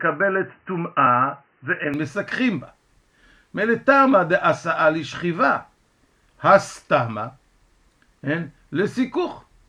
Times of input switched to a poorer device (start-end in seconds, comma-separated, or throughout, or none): 0.00-1.94